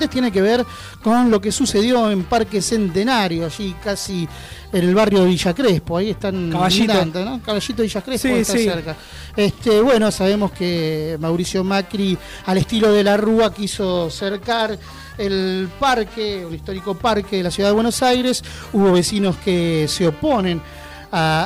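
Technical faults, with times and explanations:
Throughout, hard clipping: peaks driven about 12 dB past the limit are sliced flat, roughly one sample in twenty, giving harsh fuzz rather than soft-saturation warmth.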